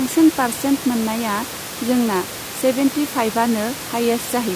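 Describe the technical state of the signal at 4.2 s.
At 4.2 s the signal is intact, with the speech carried cleanly over a low room noise that sits about 14 dB beneath it.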